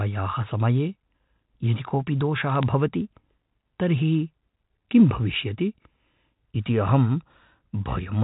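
From 2.50 to 2.63 s, bit errors on the digital phone line put a short burst of sharp ticks over the speech. Flipped bits in the G.711 stream, about 0.07 percent of them, each corrupt a single sample, and hits on the sign or upper bits throw that sample far off, giving a click. Unlike packet loss, nothing drops out: the speech runs on unchanged beneath the crackle, with its usual band limit below 4 kHz.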